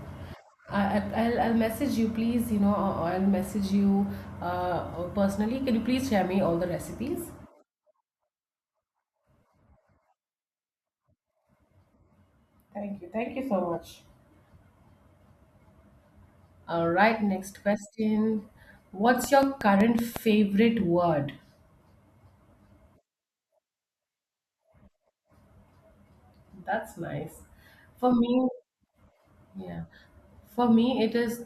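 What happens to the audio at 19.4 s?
A train of clicks runs from 19.24 to 20.17 s: about seven evenly spaced pops, 5.43 per second, roughly 15 dB above the speech, likely from interference or a faulty connection or power supply. They show as sharp waveform spikes and thin vertical broadband lines on a spectrogram.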